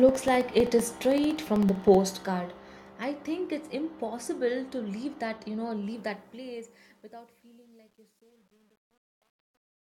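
Periodic USB or driver dropouts run from 0.09 to 1.95 s: roughly every 64 ms, around thirty times in all, about a millisecond of the speech drops to silence as something stalls the audio path, giving an even train of small ticks.

Truncation distortion on the fade appears from 5.89 s to the end. As the fade-out, starting near 6 s, lowers the level, an undithered stage keeps too few bits, consistent with 10-bit resolution, and from 6.97 to 9.84 s the tail turns gritty.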